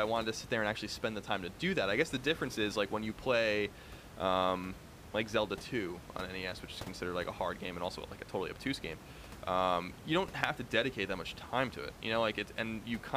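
No technical faults can be heard anywhere in this speech.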